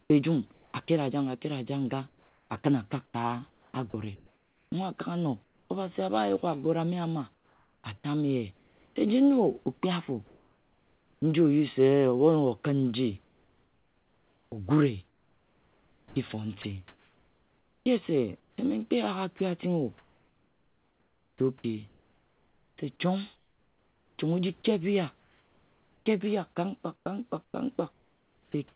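Comfort noise in place of the background, from 0.02 to 0.88 s: at the very start the real room background, faint at about 41 dB below the speech, gives way for roughly 320 ms in total to a smooth, featureless hiss. The likely cause is discontinuous transmission. The sending side judged there was no speech and sent only sparse noise descriptions, and the receiver synthesised a steady noise bed from them. That bed lacks the texture of the genuine room sound.

Sound dropped by the voice detector, from 0.86 to 0.88 s: a sliver of about 10 ms of sound is missing and covered by 20 ms of the same synthetic noise. The detector likely took that quiet sound for background, so the receiver was still filling with comfort noise.

Sound chopped by the voice detector occurs at 2.08 to 5.7 s, 7.34 to 11.22 s (just after "yuk agore ame ana"), 13.24 to 18.58 s, 19.38 to 26.06 s, and 26.96 s through to the end. 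In each stretch the sender likely toggled between transmitting and pausing more than once. Soft syllables and word edges are repeatedly swapped for generated noise, about 1.6, 1.9, 3.5, 4.1 and 0.9 s respectively. The speech sounds choppy. All of it sits within the narrow G.711 call band, with nothing above 4 kHz.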